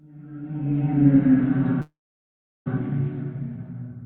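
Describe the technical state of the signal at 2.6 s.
At 2.6 s the signal is in dead silence, near the end of a call audio freeze running from 1.81 to 2.68 s. Just after 1.81 s the last sound stretches into a brief fading buzz, then drops to about 0.73 s of silence. At 2.68 s the audio picks up exactly where it stopped, with nothing lost but everything afterwards about 0.84 s late. The likely cause is packets stalling in transit, leaving the jitter buffer empty.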